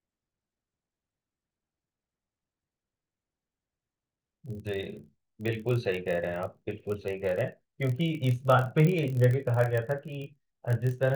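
A block size mismatch (padded) runs through the whole speech clip. One stage hands over blocks slightly shorter than the next stage reads, and the shortfall in each block is filled with zeros. Those brief silent slots repeat at 43.1 Hz, producing a steady low buzz under the speech, a rate that fits 1024-sample reads at 44.1 kHz. The gaps stretch the audio to 0.999 times normal speed, too little to hear, while the timbre stays the same.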